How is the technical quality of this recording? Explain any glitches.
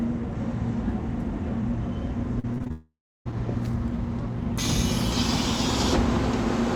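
Quality is let down by one rough patch a little before the midpoint, where the audio breaks up and then drops out briefly.

From 2.39 to 2.72 s there's repeated packet loss (robotic sound): five short gaps, the longest 40 ms, each papered over by repeating the last sound, so it turns choppy.

Right after, from 2.72 to 3.27 s, the sound smears into a fading buzz or hiss, then goes silent for about 0.31 s. That's likely a long network dropout, with roughly half a second of audio lost.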